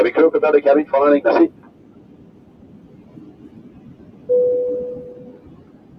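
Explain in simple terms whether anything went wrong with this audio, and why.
A noise suppressor applied to this sound runs throughout the clip. Built for speech, it treats steady tones, background ambience and reverb as noise and turns them down sharply, so sudden attacks get through while sustained parts and tails sink, making the audio pump and thin out.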